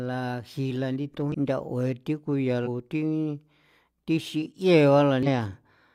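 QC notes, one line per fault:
1.30–1.35 s, damaged data in a compressed stream: corrupted bytes make the decoder misread frames and lose sync, so the speech breaks into a short chirp or blip.
2.62–2.68 s, damaged data in a compressed stream: the decoder again hits bad frame data and hunts for the next header, giving a brief chirp, squawk or click over the speech.
5.23–5.28 s, damaged data in a compressed stream: another stretch of wrong bytes throws the decoder out of sync, heard as a quick blip cutting into the speech.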